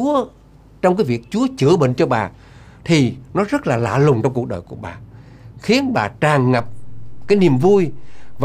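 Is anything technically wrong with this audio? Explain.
Yes. A DC step occurs at 6.60 s: the waveform's zero line suddenly shifts by about -25 dBFS, as happens when an offset enters the signal path, and the offset then holds until the end. The jump is heard as a low thump, while the sound itself continues unchanged.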